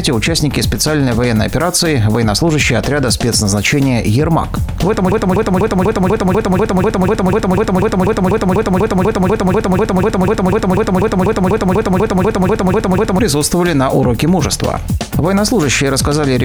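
From 5.12 s to 13.19 s, a broken-record loop: one 0.25 s fragment repeats identically, back to back, 33 times, and the audio due in that span never plays. A stalled player or stream likely kept resending its last fragment; a brief stutter would not persist this long.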